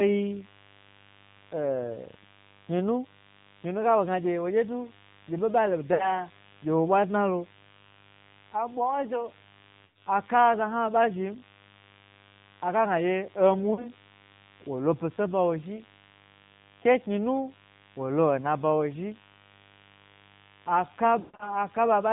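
Interference, probably from a dimmer, rectifier or unshielded cable, has coupled sharp switching spikes at twice the 50 Hz mains rate into the signal path. This produces the mains buzz heard throughout the clip: a steady, raspy drone whose harmonics climb well into the kilohertz range. It sits roughly 25 dB below the speech.

The speech has also passed through the AMR narrowband mobile codec. Sampling at 8 kHz removes everything above 4 kHz, and the voice is rebuilt from a vocal-tract model fed by sparse pulses. The damage here is plainly audible and fits a low mode of around 7.4 kbps. Consonants are dull, voiced sounds take on a buzzy, synthetic edge, and the mains buzz turns into a swirling warble.

Lost AMR speech frames interrupt the speech four times. In each case, radio errors corrupted frames, and the decoder filled the gap by repeating the last good pitch and vocal-tract settings at falling gain. 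The gaps fall at 5.94 to 6.23 s (60 ms lost), 9.86 to 10.06 s (80 ms), and 13.74 to 13.87 s (40 ms), each heard as a short dip or smeared warble. The worst occurs at 21.20 to 21.66 s, where 180 ms is lost across a 200 ms stretch. Its longest run of 140 ms draws the sound out until it fades to silence, and the speech then returns weak or rough for a moment.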